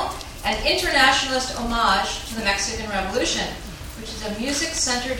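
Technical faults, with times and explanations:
No technical faults can be heard at any point in the audio, so there is nothing to place on a timeline.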